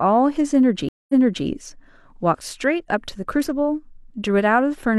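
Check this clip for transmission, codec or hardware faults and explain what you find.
There is one transmission fault. A stream reconnect runs from 0.89 s to 1.46 s. The connection broke and the player went silent for 205 ms. It then reconnected and began decoding again from partway through the stream with a fresh decoder. The server resent a burst of audio it was holding, so playback resumes 372 ms earlier than the point where it cut off. A short stretch of speech is heard twice, straight after a gap of dead air.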